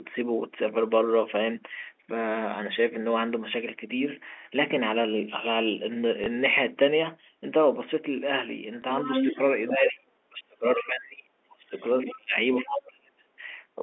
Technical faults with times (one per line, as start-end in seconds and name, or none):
6.24 packet loss with last packet repeated
8.82 packet loss with last packet repeated
9.01-9.90 other side's voice leaking through
9.26-9.37 speech suppressed in double talk
9.70-11.74 speech suppressed in double talk
10.74-10.84 other side's voice leaking through
11.78-12.12 other side's voice leaking through
12.06-13.29 speech suppressed in double talk
12.58-12.87 other side's voice leaking through